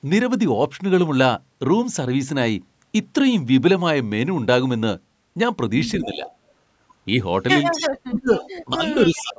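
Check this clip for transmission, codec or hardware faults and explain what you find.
Two faults appear, both in the last few seconds of this speech clip. The speech is suppressed in double talk, and there is echo leak.

Speech suppressed in double talk occurs at 6.0–6.27 s, 8.06–8.43 s and 9.09 s to the end. The speech dips by about 10 dB, 35 dB and 25 dB. The likely cause is an echo canceller that could not tell the talker from the loudspeaker echo while both sides spoke, so it ducked everything.

Echo leak occurs at 6.26–6.32 s, 7.71–7.9 s, 8.34–8.5 s and 8.75–9.23 s. A faint copy of the speech returns 236 ms late, about 15 to 20 dB below the speech. This is likely a loudspeaker echo that the far-end canceller did not fully remove.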